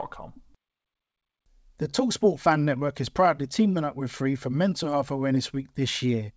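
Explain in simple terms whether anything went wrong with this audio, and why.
Something did go wrong. There is clock drift between sender and receiver. The sending device's clock runs slightly slow, by roughly one and a half percent, so the audio arrives a little too slowly all the way through.

To keep up, the receiver makes repeated timing corrections from 3.71 to 6.07 s. It repeats tiny pieces, slowing that stretch to 98% speed and adding about fifty milliseconds. You may hear small hiccups or an unsteady pace.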